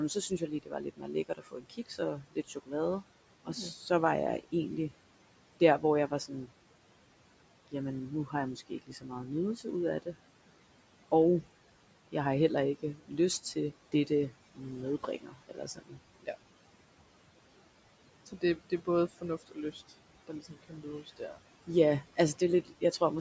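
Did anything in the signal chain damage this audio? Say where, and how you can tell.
Yes. The call processing's noise suppressor attenuates the steady room noise by about 18 dB throughout, gating it frame by frame. The noise sinks between phrases and swells back under the speech.

The same suppressor misreads quiet speech as noise and pulls it down with the background, by about 11 to 19 dB. This happens at 0.14–3.9 s (before "var jeg"), 5.6–6.5 s, 8.27–10.15 s (after "jamen nu"), 12.95–13.11 s (after "jeg har heller ikke"), 13.92–16.28 s and 18.26–23.01 s, so soft consonants and endings sound swallowed.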